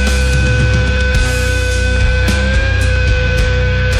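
From 0.97 s to 3.96 s a click recurs exactly once per second, about four times. These are clock drift buffer slips, likely from two clocks differing by a few hundred ppm, each dropping or repeating roughly fifteen samples. Random dropouts lack this strict spacing.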